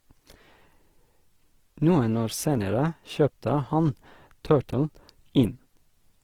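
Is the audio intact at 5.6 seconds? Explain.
No. At 5.6 seconds the speech carries plainly audible Opus compression, present across the whole clip. The likely cause is its music (CELT) mode at a low rate, around 16 kbps. It keeps each band's energy but fills starved bands by folding or noise, so tones sound rough and grainy. A spectrogram shows full bands up to about 20.2 kHz with few holes, but harmonics smeared into a noisy, speckled texture.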